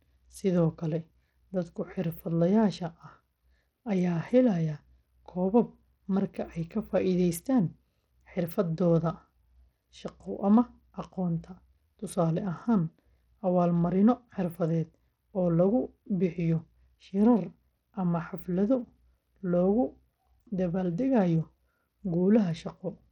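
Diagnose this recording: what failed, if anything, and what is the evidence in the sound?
The codec stage is where this went wrong. Throughout the speech, the treble flickers and drops out over a gritty, aliased grain. That's likely Bluetooth SBC compression starved of bits, which fits an 80 kbps stream, leaving the upper sub-bands empty and the rest coarsely quantised.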